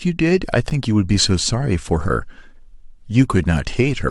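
At 0.70 s a gap between stream segments opens an 11 ms hole of silence with hard edges. Two segments' time stamps failed to meet, so the player inserted silence. Unlike a dropout, no speech is lost: the sound resumes exactly where it stopped.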